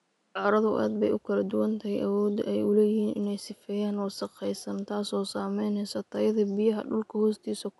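The speech carries no technical faults, and the faint room noise beneath it sits about 46 dB below the speech as an ordinary part of the recording.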